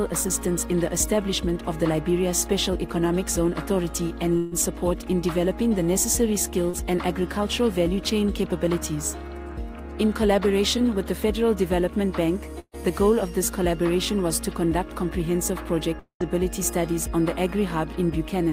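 The audio has gaps from lost network packets. Two bursts of packet loss occur, at 4.37 to 4.53 s and 12.59 to 12.75 s. Each loses about 140 ms. The receiver extends the last sound and lets it fade. At 12.59 s the fill ends in about 40 ms of silence. Playback then resumes further on, and the missing part never returns. A short concealed packet loss at 6.69 to 6.75 s drops about 40 ms. The decoder bridges it by continuing the preceding sound, then blends back. It is heard as a brief smear or wobble. At 15.99 to 16.22 s, about 220 ms of sound is missing. A held, fading fill gives way to roughly 100 ms of silence before the audio returns. The likely cause is a long network dropout.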